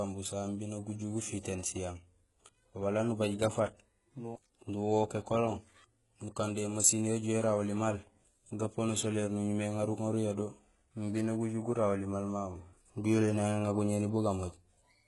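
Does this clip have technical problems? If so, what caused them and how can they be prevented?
Yes. Throughout the speech, the treble sounds synthetic. Sibilants come out gritty and metallic, and nothing is heard above about 11.5 kHz. This is likely HE-AAC compression, with heavy damage. The codec codes only the lower spectrum. It rebuilds the top by copying lower bands upward under a coarse envelope. Those copied harmonics do not match the real ones, so s sounds turn lispy. The heavy damage fits a very low bitrate, around 12 kbps. To prevent it, encode at a higher bitrate with a codec that codes the full band directly.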